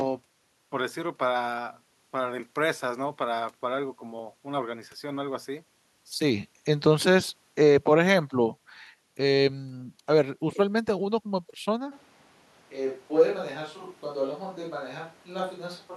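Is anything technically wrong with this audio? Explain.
Yes. From 11.93 s to the end, the speech turns hollow, roomy and thinner, about 5 dB quieter, with more background noise. This is likely a switch to a distant microphone.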